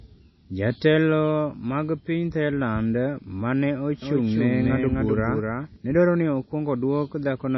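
From the start the speech has a watery, swirly quality, with nothing above 5.8 kHz, so s sounds lose their edge and smear. That's likely MP3 compression, and the damage is plain enough to fit a low bitrate around 24 kbps.

From 4.02 to 5.76 s there's a doubled audio track: a full-band copy of the speech trails about a third of a second behind, a few dB quieter, with no room decay. It cuts in and out abruptly, so it's probably a second capture path or a misaligned edit.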